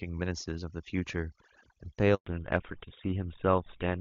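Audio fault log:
Throughout: overdone noise removal. Noise reduction set far too strong pushes individual frequency bands down or out whenever they sit near its noise estimate, so the background drops and breaks up into twinkling specks and quieter parts of the speech vanish.
2.14 to 2.26 s: handover gap. The call switched networks and no speech frames arrived for 120 ms, so the speech dies away within a few tens of milliseconds and stays silent until the new link starts.
2.26 s to end: fallback to narrowband. After the handover the call dropped from AMR-WB HD Voice, running with little or no codec damage before this at 23.85 kbit/s, to GSM full rate at 13 kbit/s. Nothing above 4 kHz survives, so the speech turns duller and rougher.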